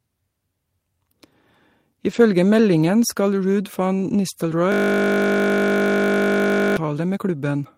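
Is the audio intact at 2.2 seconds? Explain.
No, not quite. Right up to that point, from about 2.09 to 2.19 s, there's a lost packet rebuilt from error correction. A few packets went missing there, and the amount of rough-sounding audio fits about three 20 ms frames, roughly 60 ms in all. The decoder filled the hole with the low-bitrate backup copy that the following packet carried, so nothing drops out. Instead that stretch of speech goes grainy and a bit noisy before clearing up just as you reach 2.2 s.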